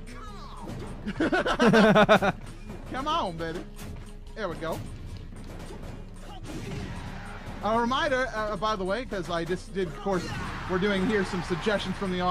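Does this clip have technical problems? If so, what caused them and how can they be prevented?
Yes. At 9.66 s there is a single sharp click, a brief tick that sits on top of the sound without removing any of it. This is most likely dropped samples: a tiny fraction of a millisecond of the stream went missing, so the waveform leaps straight from one value to a later one, and that discontinuity is what the ear catches as a click. Prevent it by giving the recording or playback chain enough buffer headroom.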